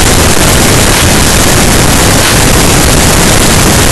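From start to finish the speech comes through as extremely loud, harsh distortion, with quiet stretches as loud as everything else. The likely cause is signed and unsigned mixed up: flipping the top bit of what sound like 16-bit samples turns every zero crossing into a full-range jump.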